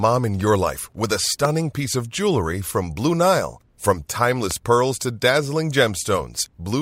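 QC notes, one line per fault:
1.45–1.47 s and 4.51–4.53 s, loud pop: a single sharp pop after "your life with a" and another just before "pearls to dazzling", about 10 dB then 15 dB above the speech, which carries on underneath. A likely electrical transient, it shows as a narrow spike on the waveform and a thin broadband vertical stripe on the spectrogram.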